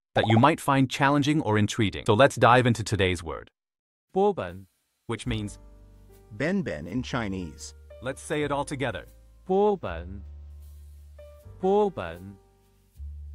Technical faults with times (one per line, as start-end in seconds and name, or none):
9.50-10.50 channel delay (comb filtering)